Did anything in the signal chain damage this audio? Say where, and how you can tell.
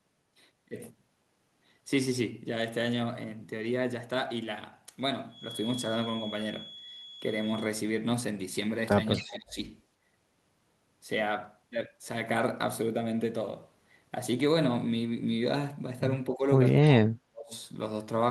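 Yes. From 9.12 to 9.37 s a faint delayed copy of the speech sits about 20 dB under the direct signal, trailing it by 266 ms. This is an echo leak at the call-processing stage, likely from a far-end loudspeaker whose echo canceller let part of the microphone pickup through and sent it back. On a spectrogram it shows as a weak duplicate of the harmonic pattern, shifted right by roughly a quarter second.

The speech also drops in level in three places: 9.18 to 9.58 s by around 20 dB, 16.34 to 16.44 s by around 10 dB, and 17.07 to 17.53 s by around 35 dB, the last nearly cutting it out. These dips are speech suppressed in double talk, likely the same call processing turning everything down when both sides spoke at once. The waveform shows the envelope abruptly pinched, and the spectrogram shows the energy fading in those windows, which overlap the echo at 9.2 s.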